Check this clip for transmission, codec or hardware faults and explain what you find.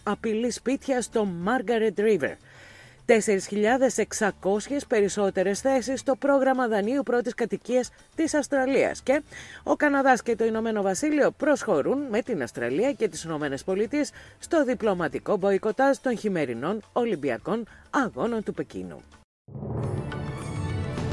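No transmission, codec or hardware faults turned up in this clip.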